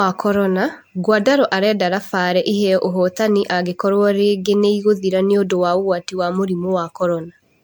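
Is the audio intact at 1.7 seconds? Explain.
No. Generation loss runs through the whole speech clip, so 1.7 s is affected too. The likely cause is repeated MP3 decoding and re-encoding, around seven passes, at a rate that fits 96 kbit/s. Each pass quantises again on a shifted frame grid, so noise and spectral holes pile up. The speech sounds swirly, smeared and hollow beyond what that bitrate alone would give, and attacks are blurred.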